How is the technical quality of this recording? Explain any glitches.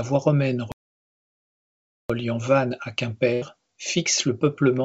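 The recording has two glitches in the speech, heard through a call codec that leaves nothing above 8 kHz.

From 0.72 to 2.10 s, right after "voie romaine", there is a playback stall: the output goes completely silent for about 1.38 s, likely because the player ran short of data or its thread was held up. Unlike packet loss, the gap is true silence rather than a filled-in sound.

From 3.34 to 3.44 s, just before "fixe le peuplement à", a burst of packet loss occurs. The receiver stretched the last sound across about 80 ms, fading it as a held buzz or hiss, then jumped ahead, so roughly 80 ms of speech is missing. That filled, skipping gap sets it apart from the silent stall.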